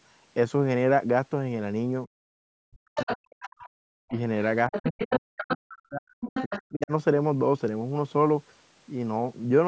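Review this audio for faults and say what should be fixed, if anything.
Speech suppressed in double talk: the voice dips by up to about 40 dB at 2.06–3.67 s, 4.06–4.15 s and 4.69–6.92 s. The echo canceller likely mistook overlapping talk for echo. A better double-talk detector would prevent this.

Other side's voice leaking through: a second voice is audible at 2.96–3.69 s, 4.08–4.19 s, 4.72–5.56 s and 6.22–6.59 s. It sits about 5 to 25 dB below the speech. This is likely loudspeaker pickup the echo canceller missed. A headset or stronger echo cancellation would prevent it.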